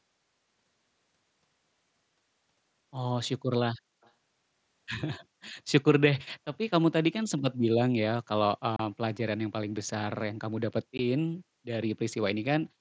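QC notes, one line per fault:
4.01–4.12 s and 7.38–7.42 s, echo leak: the far end's echo canceller likely let its loudspeaker pickup through, so a faint copy of the speech returns 261 ms late, very weak at first, then about 20 dB down.
8.76–8.80 s and 10.98 s, unconcealed Bluetooth headset packet loss: headset frames were dropped with nothing filled in, leaving abrupt holes of 30 ms and 15 ms that can click at their edges.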